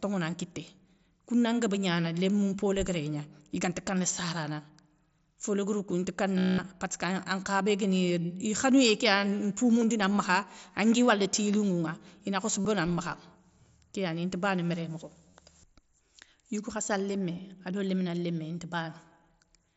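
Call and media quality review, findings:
Buzzy held tone at full level for 0.2 s at 6.38 s, right after "léguérou kou inta", warbling as speech resumes; brief glitches at 9.80 s before "makha angui wala ti", 12.61 s (45 ms) and 15.30 s after "inta bana méré mokho". Concealed Bluetooth headset packet loss: lost mSBC headset packets patched by repeating a best-matching stretch of recent waveform.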